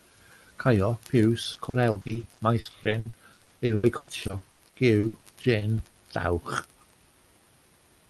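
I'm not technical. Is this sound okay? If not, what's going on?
No. Repeated packet loss (robotic sound) from 1.43 to 5.97 s: the call kept losing small bits of audio and patching each hole with earlier sound, so it turns choppy and robotic.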